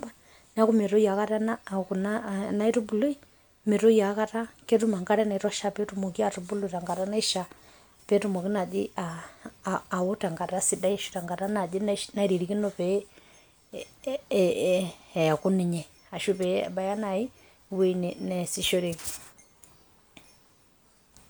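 No dropouts, clicks, distortion or level jumps turn up anywhere in this speech recording.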